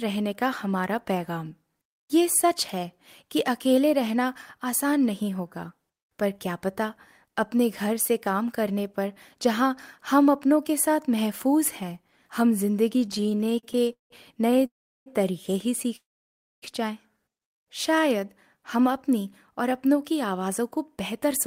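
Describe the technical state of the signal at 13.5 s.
At 13.5 s the speech is in repeated stalls (stutter), from 13.01 to 14.66 s. Delivery kept running late, so playback was held about 32 times, stretching the last sound and fading it on waits up to 174 ms. Unlike dropouts, nothing is lost; the speech just drags.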